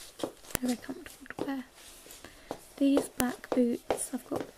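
A sharp, loud click snaps through at 0.55 s, and another one lands at 3.20 s, each lasting only about a millisecond and cutting in regardless of what the surrounding sound is doing. This is a file header played as audio: the clip was assembled from separate WAV pieces whose headers were never stripped, so those few dozen bytes of file metadata were read out as samples, producing a burst of arbitrary values at each join.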